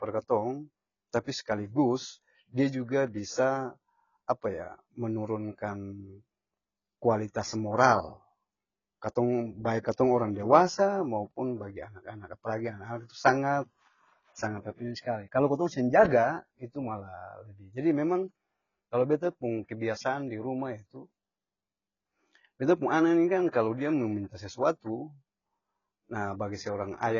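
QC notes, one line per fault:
Throughout: AAC compression. Speech is dull, nothing above 7 kHz, with fizzy, smeared sibilants. Heavy damage likely from AAC-LC, fitting about 16 kbps.
23.48 to 23.53 s: pre-echo. Between "pung ana ni kan" and "dia mo minta sesuatu", 53 ms of hiss leads a softened attack. Block quantisation noise spreads before it.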